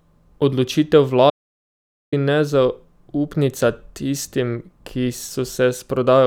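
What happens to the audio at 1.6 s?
At 1.6 s the speech is inside an audio dropout to silence from 1.30 to 2.12 s. The input was likely lost, through a disconnected device or failed link, while recording carried on writing silence. The speech cuts off abruptly, leaving about 0.82 s of dead silence with no room tone, then resumes mid-flow.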